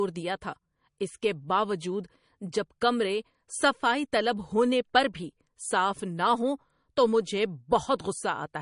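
Speech runs through the whole recording with plainly audible MP3 compression damage, likely from an encoder starved of bits. Nothing is present above 10.6 kHz, so the top octave is gone and s sounds lose their air. Weak frequency components drop in and out from frame to frame, giving the watery, swirling texture of a low bitrate, which fits something around 40 kbps, and consonant onsets are softened and smeared rather than crisp.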